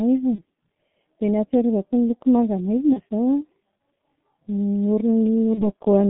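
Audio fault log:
throughout: G.723.1 codec. The speech is squeezed into roughly 150 Hz to 3.7 kHz at about 6.3 kbit/s. Nothing above that band survives. The slow-updating voice model in 30 ms frames leaves the speech heavily muffled and hoarse, with smeared consonants.
0.35–0.43 s, 2.93–3.00 s, 5.54–5.65 s: VoIP packet loss concealed by the speech codec. Each time a single 30 ms frame went missing. The decoder filled the gap by extending its last pitch and filter at falling gain. This gives a brief buzzy or noisy smear, and the voice stays weak for a moment afterwards.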